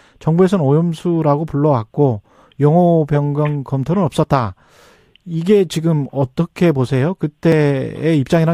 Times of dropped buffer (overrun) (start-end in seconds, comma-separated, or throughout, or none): 4.24, 7.52